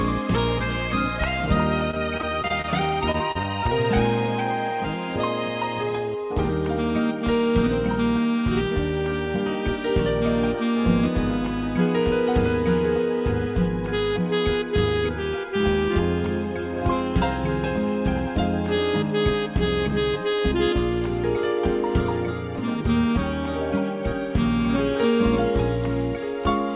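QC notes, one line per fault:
1.91–2.66 s and 3.12–3.46 s: repeated packet loss (robotic sound). Short dropouts come in quick succession, seven in the first stretch and four in the second, each 32 ms or less. Each hole is filled by carrying the last sound forward. That makes the audio choppy, with small pieces missing.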